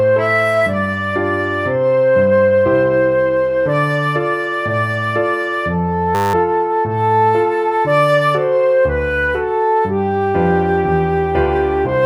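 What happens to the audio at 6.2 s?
A system hang loop runs from 6.15 to 6.34 s. The system froze while the hardware kept replaying one 10 ms buffer, giving a steady 100 Hz buzz. Unlike a dropout or glitch, nothing goes silent: one fragment repeats exactly, then normal sound resumes.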